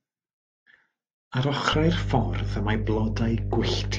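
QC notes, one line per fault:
1.73 s to the end, mains hum. A steady low tone at 50 Hz appears under the speech and holds until the clip ends. It is roughly as loud as the speech itself, so it competes directly with the low end of the voice. A few low harmonics sit above it. This points to power-line energy leaking into the signal path, through a ground loop or a nearby transformer.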